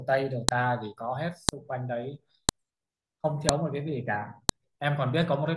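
At 0.49, 1.49, 2.49, 3.49 and 4.49 seconds, a sharp, loud click cuts through the speech. These are file header played as audio. The stream was assembled from one-second WAV pieces, and each piece kept its header. Those few dozen bytes are read as sample values. They form a brief, jagged burst of about 2 ms. The snap lands exactly once per second, regardless of what the speech is doing.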